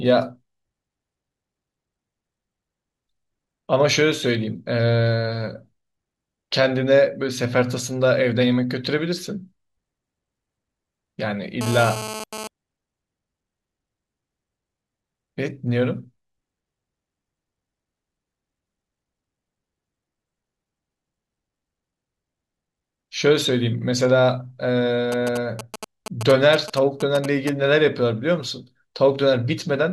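From 11.61 to 12.47 s there is GSM phone buzz. A nearby 2G phone is moving data. The audio circuit rectifies its radio pulses, sent about 217 times a second. The result is a hard, raspy 217 Hz buzz, about 10 dB below the speech, that comes and goes.

From 25.12 to 27.49 s come GSM signalling bursts. The phone now sends only short groups of radio bursts at the same 217 Hz rate. These rectify into a galloping dit-dit-dit of short 217 Hz buzzes, roughly ten decibels under the speech.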